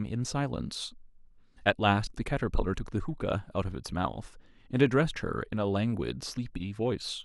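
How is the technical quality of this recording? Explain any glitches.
No technical faults are audible anywhere in the speech recording, so there are no glitches to explain.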